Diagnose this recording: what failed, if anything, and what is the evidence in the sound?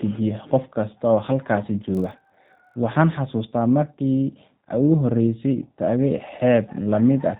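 The whole recording has been through a G.729 codec, plainly audible from start to finish. Nothing gets past about 4 kHz, so everything sounds boxed in, and there's that slightly rough, synthetic edge you get when speech is rebuilt from a vocal-tract filter, a pitch predictor and a handful of pulses per frame. The bandwidth and texture fit the G.729A flavour at 8 kbit/s, so this is a codec stage in the call path.

From about 1.93 s to 2.74 s there's a block size mismatch (padded), a buffer or driver problem. A buzz sits at roughly 43 Hz. That rate fits a stage reading 1024-sample blocks at 44.1 kHz while the stage before it hands over slightly short ones. Each block gets its tail filled with zeros, and those tiny gaps repeating at the block rate make the buzz. Because the padding is so small, playback runs only a hair slow, and pitch stays put.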